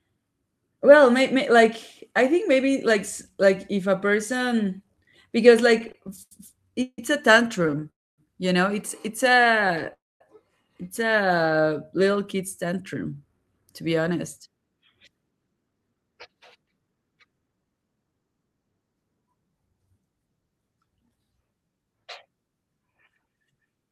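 Repeated stalls (stutter) start at 5.78 s and run to 6.99 s, then recur at 7.63–7.81 s and 9.37–9.86 s. Late packets emptied the jitter buffer, so the sound drags and repeats itself, with gaps up to 153 ms.

A call audio freeze follows at 7.90–8.19 s and again at 9.93–10.21 s. Each is about a quarter-second of silence, likely from held-up packets.

From 12.16 s to 18.13 s, a jitter buffer speed-up plays the speech at 110% speed. It trims about 0.7 s, and the speech sounds hurried at unchanged pitch.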